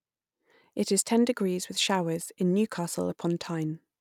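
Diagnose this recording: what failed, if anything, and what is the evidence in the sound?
Nothing failed; no faults heard.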